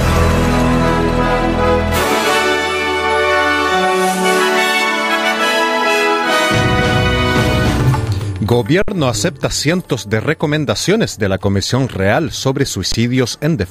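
At 8.82 s and again at 12.92 s the output buffer ran dry: an underrun with held sample, lasting 60 ms and then 20 ms. The converter froze on its last value, so the sound flattens into silence without a sharp click, then resumes fairly softly where it stopped.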